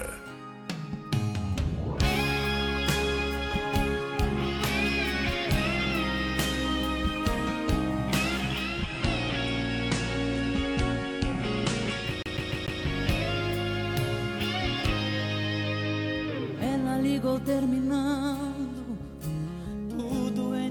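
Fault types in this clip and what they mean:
Digital radio blending to analogue, 8.49 to 12.99 s: the receiver loses its digital stream and cross-fades over about 0.45 s to the station's FM broadcast, then returns the same way at the end. During the analogue stretch the level drops by about 1 dB, and a layer of hiss appears roughly 30 dB below the programme, the usual signature of an FM signal.
CD stuck on one turn, 12.23 to 12.81 s: a scratch makes the laser jump back one track at the same point on each rotation, so the same 0.15 s slice of audio plays four times in a row. A brief mute at every jump gives the fast, evenly spaced stutter of a skipping disc. It happens while the analogue blend is still in progress.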